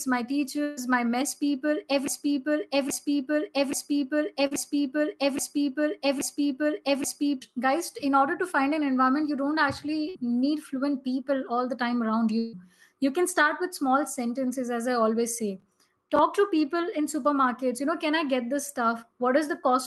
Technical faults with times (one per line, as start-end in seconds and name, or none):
0.63-0.79 burst of packet loss
2.08-7.42 broken-record loop
4.47-4.53 short concealed packet loss
10.09-10.17 burst of packet loss
12.39-12.55 burst of packet loss